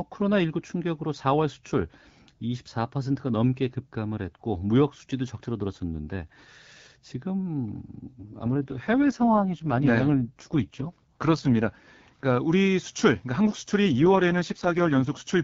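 From 8.20 to 11.65 s the speech turns rough and buzzy, then clears, and the same roughness returns from 13.84 to 15.10 s. Both are an AMR rate drop. The bandwidth holds and nothing cuts out, but the coarser excitation coding makes the voice sound raspy and synthetic, which fits the AMR-WB link falling from 12.65 to 6.6 kbit/s so that bits go to error protection. Outside those spans only the light HD Voice coding is audible.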